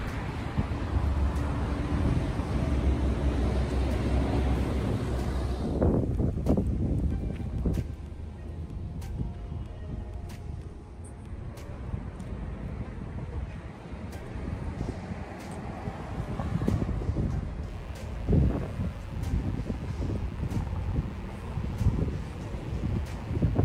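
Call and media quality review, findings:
Mains buzz from 17.68 s to the end. Steady raspy buzz, roughly 30 dB under the signal. Probable dimmer, rectifier or unshielded line. Switching spikes twice per 60 Hz cycle, with harmonics stacking up to several kHz.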